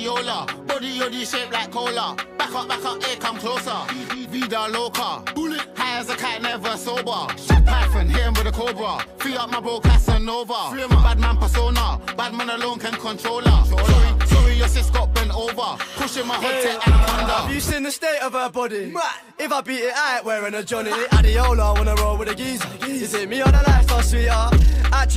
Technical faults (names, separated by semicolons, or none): none